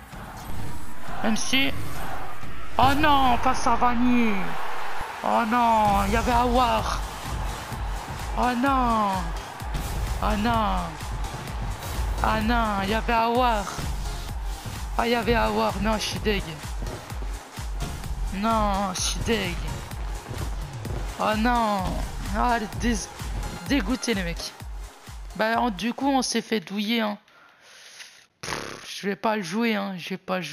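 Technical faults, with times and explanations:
0.50–5.01 s, DC step: the waveform's zero line jumps by about −23 dBFS at 0.50 s, and the offset lasts until 5.01 s. The offset itself is silent, but the sudden shift gives a low thump or click while the sound carries on unchanged.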